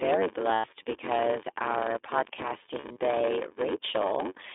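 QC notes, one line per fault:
throughout, block size mismatch (padded): each block read, consistent with a 512-sample buffer, is short-filled and zero-padded, causing a 93.8 Hz buzz and speech running slow at 0.861 times speed, pitch roughly unchanged.
throughout, iLBC codec: narrowband frame-by-frame coding, consistent with the 15.2 kbps, 20 ms mode, limits sound to 300 Hz to 3.6 kHz and leaves speech plainly rough and synthetic.
0.54 to 0.68 s, lost iLBC frames: 100 ms of packets went missing and the decoder repeated the last pitch cycle with noise, a buzzy held vowel before "because our".
2.80 to 2.98 s, lost iLBC frames: 80 ms of packets lost, scattered across 160 ms in short runs, each concealed by brief buzzy breathy repeats that recover almost at once.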